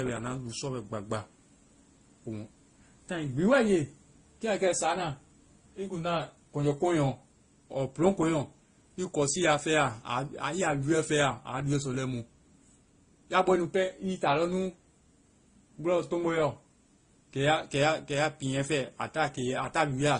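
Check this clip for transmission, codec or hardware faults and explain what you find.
The speech carries one fault for its entire length: transcoding between lossy codecs. It sounds as though it was encoded to a low-bitrate MP3 at around 32 kbit/s and then likely re-encoded as Opus at about 24 kbit/s. The second encoder wastes bits reproducing the first one's smearing and adds its own artefacts, so two kinds of artefact are heard together. On a spectrogram, everything above 9.8 kHz is empty, with a flat ceiling and blotchy, patchy detail below it.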